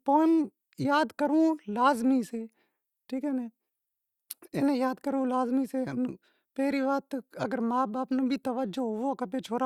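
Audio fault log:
No technical faults can be heard anywhere in the speech recording; the signal stays steady and intact over its whole span.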